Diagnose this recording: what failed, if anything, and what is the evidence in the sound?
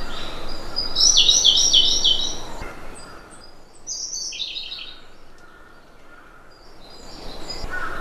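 Unsmoothed gain stepping in the buffer stage causes zipper noise: audible 3 dB stair-steps at a few per second, clicking from 2.6–3.64 s as the level drops and from 6.56–7.4 s as it rises.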